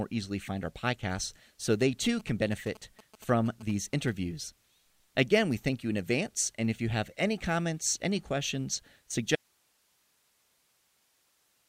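Speech, with two faults. From 1.72 to 4.10 s, GSM signalling bursts break in. They are a galloping pattern of short buzzes at a 217 Hz repeat rate, sitting roughly 20 dB below the speech. A nearby 2G phone is signalling to its network, and the audio circuitry rectifies those radio bursts into sound. At 9.36 s the speech stops abruptly and does not return before the end. This is an audio dropout to a faint residue. Only hiss remains, around 40 dB below the speech level. It is a hard cut, not a pause or a fade. The likely cause is that the wanted signal was lost upstream while the stage after the break stayed live, passing its own hiss.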